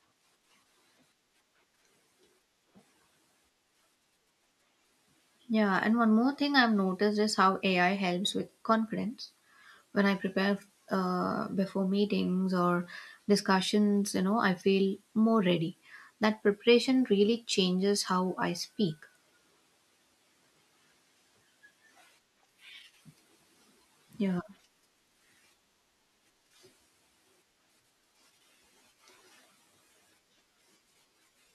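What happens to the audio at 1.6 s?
At 1.6 s the audio is intact, with no dropout, glitch or other fault at that moment.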